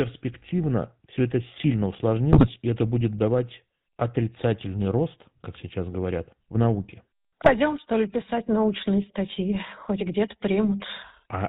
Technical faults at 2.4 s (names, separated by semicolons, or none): GSM full-rate codec; GSM bit errors